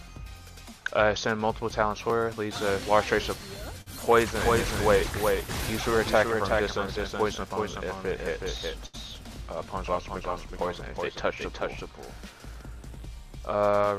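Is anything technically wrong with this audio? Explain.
Yes. There are short stalls from late packets at 3.81–3.88 s and 8.86–8.96 s. The jitter buffer ran dry and the last sound was held for 50 ms and then 73 ms. Each shows as a briefly frozen, smeared spectrogram column.

A doubled audio track runs from 4.38 to 12.62 s. It is likely a second, slower capture path: a copy about 5 dB quieter trails by roughly 0.4 s. It sounds like a dry, reverb-free echo. On a spectrogram the whole pattern repeats, offset in time, and it starts and stops abruptly.

A jitter buffer speed-up from 12.76 to 13.55 s trims a few tens of milliseconds in pitch-period slices. The audio runs 4% faster at unchanged pitch, with a compressed waveform envelope.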